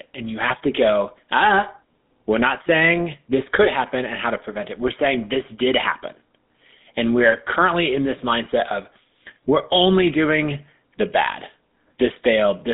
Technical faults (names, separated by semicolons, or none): GSM full-rate codec; GSM bit errors